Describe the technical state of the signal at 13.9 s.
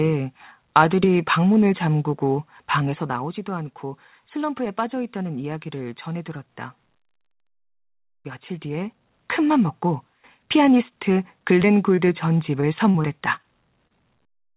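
At 13.9 s there is short concealed packet loss, spanning 13.87 to 13.92 s. About 20 ms of the call arrived too late for the decoder. The receiver bridged the hole by extending the preceding sound for roughly 28 ms, then blended back into the real signal. It is heard as a brief smear or wobble in the speech, and a short consonant may drop out. The band stops at 4 kHz, which fits a narrowband G.711 call path.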